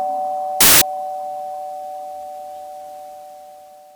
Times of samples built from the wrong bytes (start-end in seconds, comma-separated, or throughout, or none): 0.61-0.81